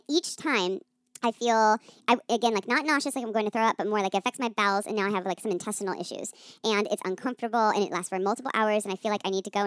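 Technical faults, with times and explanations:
Throughout, wrong sample rate: the samples run out faster than they were captured, with no conversion, which fits 16 kHz audio played at 22 kHz. The speech runs 1.38 times fast and sits 5.55 semitones high, sounding hurried and thin.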